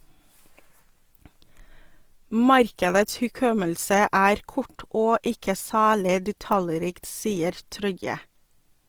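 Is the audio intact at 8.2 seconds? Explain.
No, at 8.2 seconds the speech carries grainy, rough Opus compression, likely from low-rate CELT coding near 24 kbps; a spectrogram shows noise-filled bands with content stopping at about 20.4 kHz.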